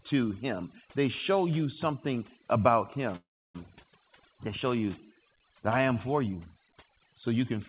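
Overdone noise removal runs through the whole speech clip. The suppressor was pushed too hard, so frequency bands close to its noise estimate are cut away along with quieter parts of the voice. The result is near-silent gaps sprinkled with twinkling specks, all within a band that stops at 4 kHz, which fits a narrowband telephone codec.

A call audio freeze runs from 3.16 to 3.58 s, likely caused by delayed packets draining the jitter buffer. The receiver stretches out the last sound briefly, then leaves about 320 ms of silence. When the audio resumes, nothing is lost, but a 385 ms hole has been inserted.

A skip ahead occurs at 3.83–3.87 s. Roughly 150 ms of audio was discarded while later packets were already queued, so playback jumps forward. The two sides are joined with only a tiny filled seam, and part of the speech is simply missing.

A jitter buffer slow-down follows from 4.09 to 5.94 s. 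To rebuild its reserve, the receiver repeated individual pitch periods and slivers of pauses, adding 154 ms in total. Speech runs at about 92% speed with unchanged pitch, so sounds drag slightly.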